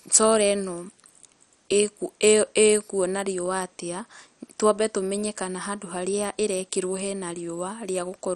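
From start to finish the speech sounds dull and gurgly, with nothing above 13 kHz, likely heavy MP2 compression starving upper sub-bands, which fits a low bitrate around 56 kbps.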